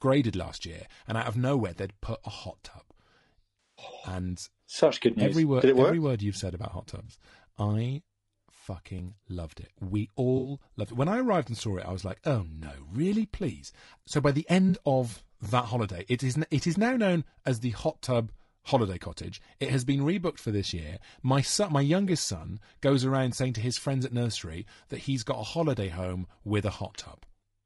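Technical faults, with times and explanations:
Throughout, low-delay AAC compression: the speech sounds rough and grainy, with a noisy haze between the harmonics and a thin, synthetic-sounding top band. This is likely low-delay AAC, AAC-ELD, at a rate that fits about 32 kbps. Its short frames blur the voice's harmonic structure and leave too few bits. On a spectrogram the harmonic stripes look smeared and noise fills the gaps between them. The upper band looks patchy or blocky.
3.6–3.85 s, 7.05–7.11 s, 10.37–10.51 s and 14.69–14.75 s, AAC frame loss with concealment: brief smeared, phasey, noisy patches, each about 180, 40, 80 and 40 ms long. They fall just after "you've said about hot", just before "loved it", and between "by the" and "of that holiday it". The decoder rebuilt the missing frames from the last good spectrum. On a spectrogram each gap shows a frozen, blurred copy of the preceding frame rather than clean harmonics.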